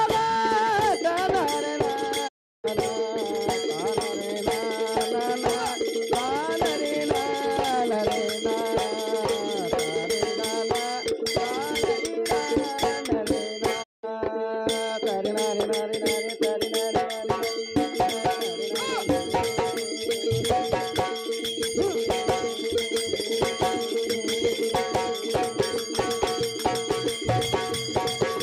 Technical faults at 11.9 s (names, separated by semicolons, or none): none